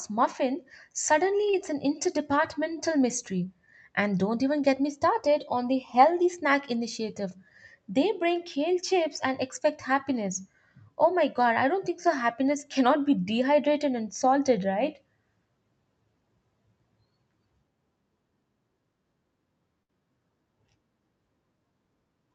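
Speech carried over a WebRTC call path, where the Opus coding leaves the top end stopping at about 8 kHz. At 1.50 s there is a short concealed packet loss. For roughly 25 ms the decoder had nothing to play, so it extended the preceding sound to fill the hole and then blended back into the real signal. What you hear is a quick smear or wobble, not a dropout, and about 30 ms of the original is skipped. From 19.83 to 19.90 s there is a burst of packet loss. It is longer and stands apart from the short loss because the filled stretch, about 60 ms, is heard as the last sound held on while it sags in level. When the audio comes back, about 60 ms of the original has gone missing, so the speech jumps ahead rather than picking up where it stopped.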